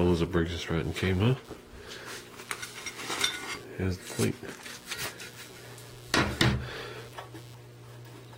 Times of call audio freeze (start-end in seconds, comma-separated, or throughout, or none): none